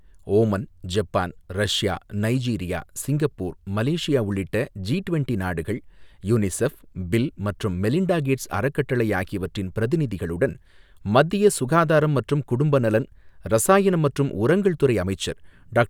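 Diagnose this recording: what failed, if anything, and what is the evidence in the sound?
Nothing failed: no stage of the chain, from the analogue wiring through conversion, buffering, processing, transport and storage to playback, leaves an audible mark on this speech recording.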